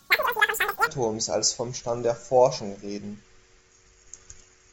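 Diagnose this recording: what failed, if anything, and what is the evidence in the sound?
Wrong sample rate at playback, 0.0 to 0.87 s, before "als vom". Speech runs triple speed, 19 semitones high. Fits 16 kHz audio played at 48 kHz.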